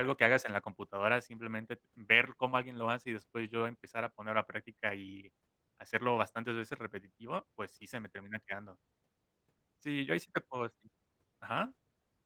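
Nothing faulty is heard in the speech, and the Opus voice compression leaves only light coding texture while keeping the full band, which points to hybrid operation at around 20 kbps.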